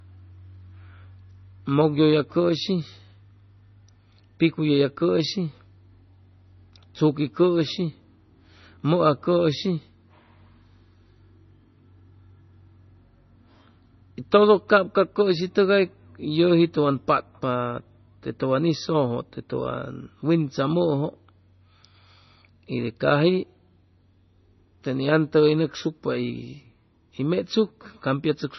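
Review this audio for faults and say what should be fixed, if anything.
Throughout the speech, the encoding was likely MP3 compression at a very low bitrate, consistent with 24 kbps. Short of bits, the encoder cut everything above 6 kHz and dropped weak frequency lines frame to frame. The result is dull, watery, swirly sound with metallic chirps on s sounds and smeared attacks. Encoding at a much higher bitrate, or storing the audio in a lossless format, would prevent this.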